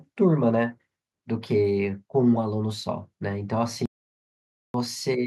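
At 3.86 s the input to the recorder was likely lost, through a disconnected device, a failed link or a mute, while writing continued with silence. The result is an audio dropout to silence: the speech cuts off mid-flow and the clip falls into dead silence with no room tone beneath it. That gap runs until 4.74 s, and whatever was spoken in those 0.89 s is gone, with speech resuming abruptly afterwards.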